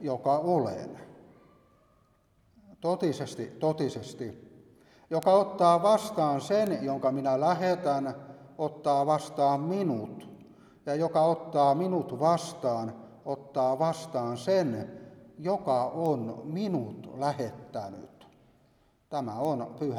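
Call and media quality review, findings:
Bit error spikes: four isolated sharp ticks at 5.23, 6.67, 16.06 and 19.45 s, peaking around -15 dBFS for the first two and about -21 dBFS for the last two. Single flipped bits in memory or on a digital link jump one or two samples by a power of two and snap straight back, giving broadband clicks with no relation to the audio underneath.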